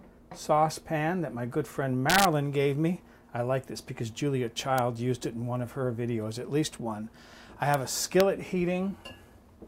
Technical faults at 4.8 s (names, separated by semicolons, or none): integer overflow